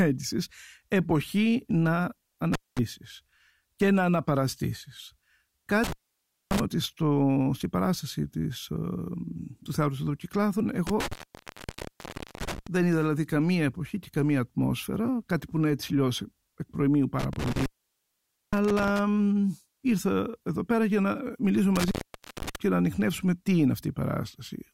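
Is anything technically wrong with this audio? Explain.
Yes. Intermittent contact interrupts the speech five times: 2.53–2.79 s, 5.84–6.60 s, 10.87–12.67 s, 17.19–18.99 s (just after "εκ προημίου"), and 21.76–22.56 s (just before "και να ανοιχνεύσουμε τι"). A loose plug or cable briefly breaks the signal path, leaving dropouts of roughly 0.21, 0.58, 1.29, 0.87 and 0.51 s. Crackle marks the breaks, with faint hiss between them. On a waveform these are near-flat gaps with spiky edges. On a spectrogram they are dark bands bounded by vertical broadband clicks.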